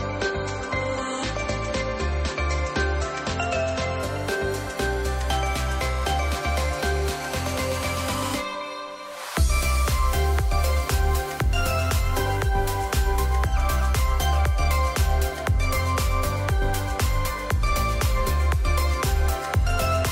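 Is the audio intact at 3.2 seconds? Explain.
No. At 3.2 seconds the audio is still inside an adaptive stream starting at a low bitrate, which runs from 0.0 to 4.0 s. The player began on a cheap, low-quality rendition so playback could start at once, then switched up after gauging the connection. Until that switch nothing is heard above 8.4 kHz, and the smeared, swirly artefacts fit a low-rate MP3, around 32 kbit/s. At 4.0 s the treble returns abruptly, consistent with about 128 kbit/s, with no gap.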